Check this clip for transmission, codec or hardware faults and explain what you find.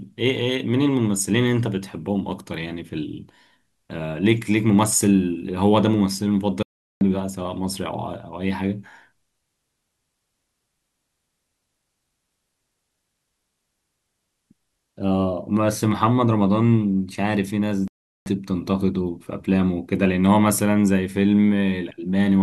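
Two short holes in the speech point to a Bluetooth dropout. At 6.63–7.01 s and 17.88–18.26 s the sound vanishes for about 384 ms, then resumes as if it had kept playing. The likely cause is packets reaching the headphones too late and being discarded. On the waveform each gap is a flat line with abrupt or briefly faded edges, and on a spectrogram it is a blank vertical band across all frequencies.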